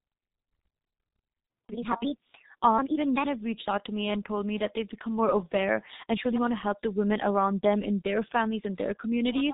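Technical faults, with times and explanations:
Throughout, heavy G.723.1 codec damage. Nothing passes above 3.8 kHz, muffling the speech. Coarse 30 ms frames blur consonants and add hoarseness, fitting about 6.3 kbit/s.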